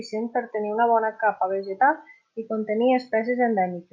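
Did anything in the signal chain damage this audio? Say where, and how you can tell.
No, nothing in the signal chain audibly damaged this speech.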